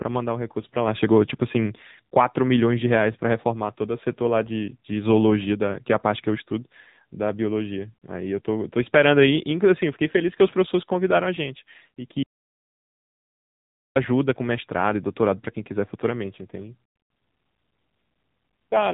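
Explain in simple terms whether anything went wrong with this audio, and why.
Two things went wrong here. First, the whole recording of speech has been squeezed through the AMR narrowband mobile codec, the old 2G/3G phone standard. It throws away everything above about 3.8 kHz, so the voice sounds boxed-in and muffled, like a call on an old phone. It's also been run at a fairly low setting, which gives that buzzy, synthetic edge you can plainly hear on every sentence.

Second, there's an audio dropout to silence from 12.23 to 13.96 s, about 1.7 seconds. The sound just stops dead and comes back mid-flow, and the gap is silent with no room tone at all. That's most likely the input being lost for a moment, through a loose connection, a link hiccup or an accidental mute, while the recorder kept writing silence. Whatever was said in that stretch is gone for good.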